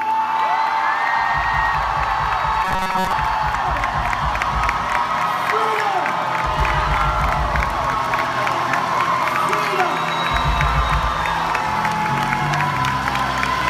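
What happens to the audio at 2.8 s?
At 2.8 s the sound collapses into robotic sound from repeated short buffers, from 2.65 to 3.13 s. It turns into a rigid, metallic buzz locked at 188 Hz. The likely cause is audio arriving late, with a slice of about 5 ms replayed over most of the span.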